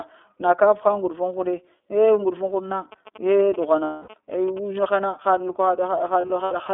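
The speech runs through the iLBC codec from start to finish. Nothing below 300 Hz or above 3.5 kHz survives. The coding damage is plainly audible. The voice sounds rough and slightly synthetic. That fits the codec's 30 ms frame mode.

GSM signalling bursts start at 2.92 s and last until 4.82 s. A nearby 2G phone is signalling, and the audio circuit rectifies its radio bursts. They come through as a galloping dit-dit-dit of short buzzes at 217 Hz, about 20 dB below the speech.

Lost iLBC frames appear from 3.84 to 4.14 s. About 270 ms of audio goes missing, scattered over 300 ms. The longest gap runs roughly a fifth of a second. The decoder fills each gap by repeating the last pitch cycle mixed with noise. It sounds like a held, buzzy vowel. A second cluster from 6.21 to 6.54 s loses 120 ms, in shorter runs. The voice is right again almost at once after each gap, because each frame decodes on its own.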